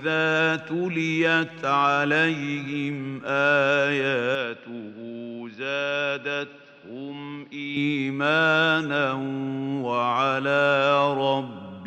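From 4.35 s to 7.77 s the sound abruptly narrows: nothing above 5.9 kHz gets through, the level falls by about 5 dB, and a new background noise sits about 30 dB below the signal. The change comes with no gap, then reverses just as suddenly. The likely cause is an input switched to a poorer device. A plain low-pass filter would dull the top without shifting level and noise floor together.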